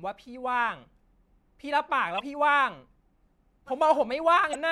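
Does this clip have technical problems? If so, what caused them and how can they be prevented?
Yes. Damaged data in a compressed stream appears at 2.16 to 2.20 s and again at 4.51 to 4.55 s, each a brief chirp or blip cutting through the speech. Corrupted bytes in the encoded file leave the decoder unable to read those frames properly, so it loses sync and produces garbage until it finds the next valid frame header. Storing and sending the file with checksums and error-checked transfer prevents this.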